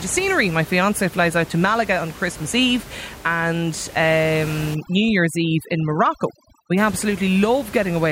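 Overdone noise removal from 4.75 to 6.78 s: over-strong reduction switches off frequency bands near its noise estimate, leaving twinkling near-silence. Outside that stretch, the room noise sits about 17 dB below the speech.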